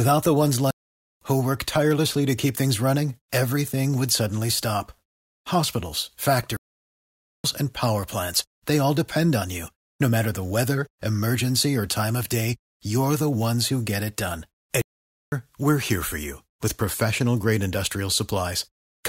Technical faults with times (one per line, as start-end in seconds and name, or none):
0.71-1.21 playback stall
6.57-7.44 playback stall
14.82-15.32 playback stall